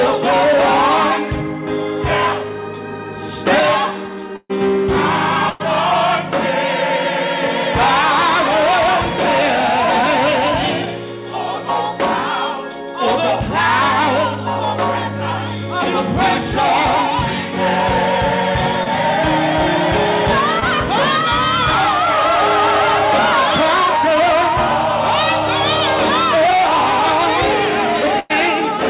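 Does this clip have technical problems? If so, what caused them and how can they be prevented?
Yes. The network dropped several packets in a row at 4.36–4.51 s, 5.49–5.62 s and 28.19–28.32 s, producing a burst of packet loss each time. The receiver stretched the last sound into a fading buzz or hiss. About 140 ms was lost in the first gap, which included roughly 30 ms of silence. About 100 ms was lost in each of the other two before the audio resumed further on. Forward error correction, redundancy, and a less congested or wired connection would prevent these.

Packets arrived too late at 18.84–18.88 s and 20.60–20.63 s, causing short concealed packet loss. About 20 ms was patched by extrapolating the preceding sound and then blending it back into the real audio, which leaves a brief smear or wobble. A slightly deeper jitter buffer would let such late packets arrive in time.

The band-limited call path, with nothing above 4 kHz, points to a 64 kbps narrowband call codec.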